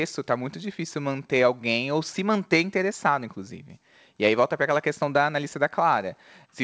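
Nothing in the signal stands out as a fault; the speech comes through a call path with no content above 8 kHz, which fits a wideband call codec such as G.722.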